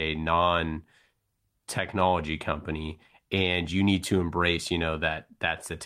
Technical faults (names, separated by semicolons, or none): none